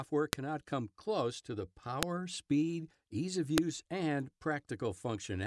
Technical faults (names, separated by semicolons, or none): file header played as audio